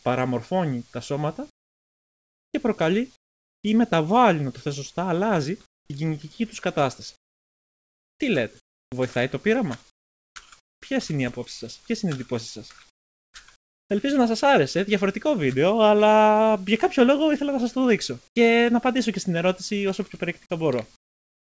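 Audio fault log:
1.50–3.64, 5.66–5.90, 7.16–8.92, 9.90–10.82, 12.90–13.90, 18.28–18.36 and 20.96–21.45 s: comfort noise in place of the background. The real background gives way to steady, featureless hiss, up to about 27 dB quieter. This is likely discontinuous transmission filling the pauses with synthetic noise.
18.34 s: onset clipped by the voice detector. The sound starts abruptly, missing about 20 ms of its soft beginning. The voice detector was likely slow to reopen.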